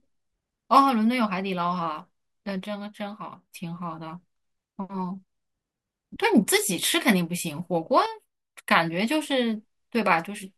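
At 2.64 s the speech and the background noise drop together by about 6 dB, then return at 3.54 s. The same sudden gain jump recurs from 8.06 s to 8.68 s, this time by about 7 dB. Both steps are instantaneous rather than faded, so the level changes abruptly at each boundary. The likely cause is a digital gain setting being applied from one sample to the next without a ramp.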